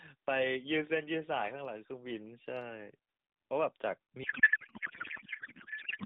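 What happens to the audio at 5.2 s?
At 5.2 s the speech is replaced by garbled noise and warble that barely tracks it. This is a codec payload misread, running from 4.24 s to the end of the clip. The decoder unpacks AMR bits from the wrong positions, which fits octet-aligned frames being read as bandwidth-efficient.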